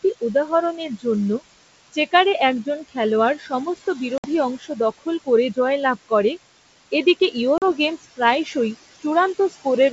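A noise suppressor works on this speech throughout. It judges each frequency band frame by frame and pulls down whatever it takes for steady noise, cutting it by about 17 dB. The room noise, about 13 dB below the speech, sinks in the gaps and comes back up under the talking.

From 0.03 to 6.11 s the same suppressor shows speech cut by the noise suppressor. It mistakes parts of the speech for background and turns them down along with it, by as much as about 20 dB and for roughly 0.7 s in all. Soft consonants and word endings in that span sound swallowed or faint.

Packet loss on an ADPCM call strikes twice. The coding here is G.722 at what sounds like its full 64 kbit/s, clear to about 7 kHz with only faint hiss above. From 4.18 to 4.26 s a 60 ms hole opens with hard edges, which fits a few lost packets replaced by silence. When the audio resumes, the decoder's predictor and step size no longer match the sender's. 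The speech comes back slightly distorted before settling. A second, 40 ms dropout between 7.58 and 7.72 s behaves the same way.

From 7.98 to 9.66 s the noise suppressor again cuts into the speech, by up to about 20 dB and for roughly 0.3 s in total, leaving soft sounds faint.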